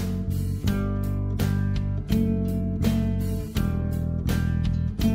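Sample clock jitter runs through the whole clip. The converter's clock wanders, so each sample is captured a little early or late. The timing spread is around two microseconds. Where the waveform changes fastest, that timing slip turns into the biggest amplitude error. The result is a faint hiss and roughness riding on the sound, roughly 45 dB below it. It grows on loud and bright passages. It disappears wherever the sound falls silent.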